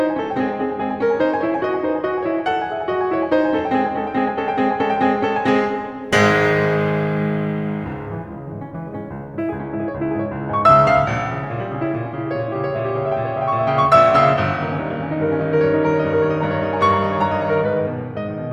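From 6.04 s to 9.59 s the music picks up sample clock jitter. The converter's timing wanders by roughly a microsecond or two. Each sample lands a little early or late. Where the waveform moves fast, that timing slip becomes an amplitude error. The error sits about 40 dB below the music. It is heard as a fine hiss and grain riding on the loud, bright passages. It thins out when the music is soft.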